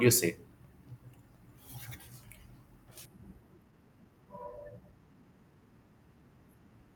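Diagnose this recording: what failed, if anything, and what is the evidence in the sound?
At 3.05 to 3.07 s the speech jumps abruptly forward with no silence or fill, and the two sides are spliced almost directly, so roughly a second of talk is simply gone. This is a skip ahead at the network and jitter-buffer stage: a run of audio was discarded, either lost in transit or dropped when the buffer overflowed, while later packets were already queued, and playback resumed from those, cutting the delay by about a second.

From 3.17 to 5.32 s the speech sounds hurried, running at about 113% of normal speed while the pitch stays unchanged. This is a jitter buffer speed-up, again at the receiver's buffer: it was holding more audio than its target, so it repeatedly removed short slices one or a few pitch periods long. Across that stretch roughly a third of a second was taken out, compressing the timing without shifting the pitch.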